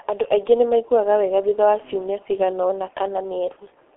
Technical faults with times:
0.00-3.96 G.723.1 codec

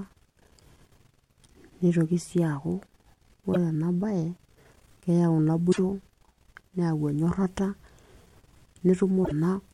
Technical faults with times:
3.53-3.56 damaged data in a compressed stream
5.68-5.79 damaged data in a compressed stream
9.21-9.32 damaged data in a compressed stream

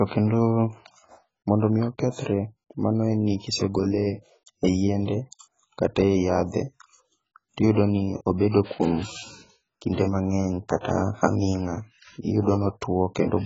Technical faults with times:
0.00-13.46 AAC compression
10.81-10.85 pre-echo

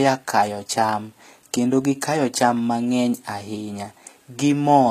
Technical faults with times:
0.00-4.91 HE-AAC compression

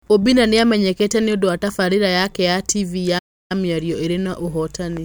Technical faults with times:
3.18-3.52 playback stall

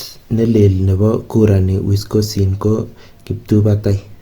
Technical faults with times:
0.00-4.21 Opus compression

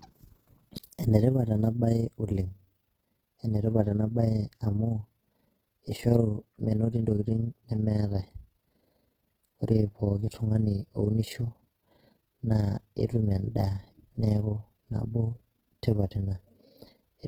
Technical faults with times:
0.00-17.28 Opus compression

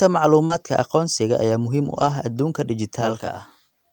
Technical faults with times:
0.45-0.52 short concealed packet loss
0.50-0.56 lost packet rebuilt from error correction
1.86-2.12 lost packet rebuilt from error correction
3.01-3.92 channel delay (comb filtering)

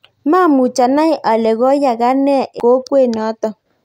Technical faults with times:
2.60 CD skip

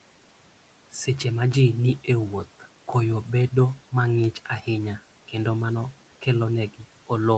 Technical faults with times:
4.24 bit error spike

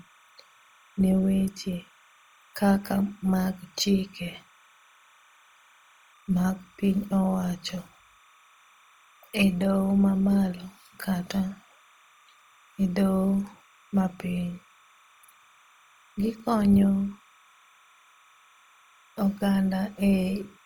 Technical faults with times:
0.00-20.65 timecode bleed
0.00-20.65 Opus compression

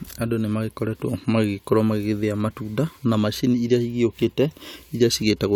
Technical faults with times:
none

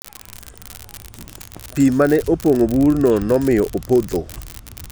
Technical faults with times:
0.00-4.91 unreliable data bit

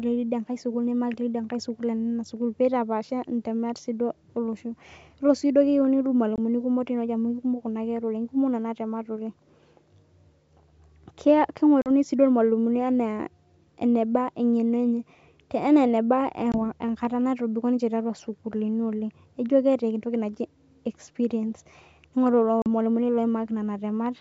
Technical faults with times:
6.36-6.39 packet loss on an ADPCM call
11.82-11.88 packet loss on an ADPCM call
16.52-16.55 packet loss on an ADPCM call
22.62-22.68 packet loss on an ADPCM call

